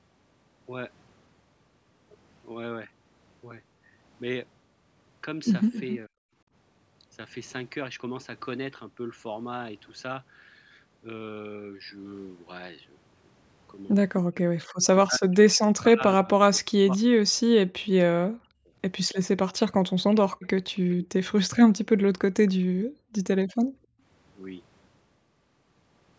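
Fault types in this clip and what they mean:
Echo leak: a delayed copy of the speech trails about 271 ms behind, near 5.7 s and 19.1 s, likely loudspeaker echo the canceller missed.
Speech suppressed in double talk: the voice dips by roughly 40 dB or cuts out, longest from 14.2 to 18.1 s, likely from the canceller muting overlapping talk.
Background gated by the echo canceller: room sound drops by about 37 dB for a few tenths of a second, as the canceller clamped the microphone during loudspeaker playback.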